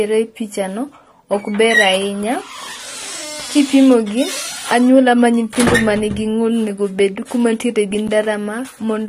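Block of digital silence at 5.55 s in this speech clip, just after "kipimo gi anyuola ma", and again at 8.08 s, after "kuma nitiere gi". The sound drops out and returns with no fade, for 5.3 ms and then 10.7 ms, which fits 256- and 512-sample buffers. Both are too short to be heard as silence and come across as a tick or dip. Throughout, the sound is band-limited, with nothing above 15.5 kHz, and codec damage is plainly audible, most likely from AAC compression (AAC-LC at a low bitrate of about 32 kbps).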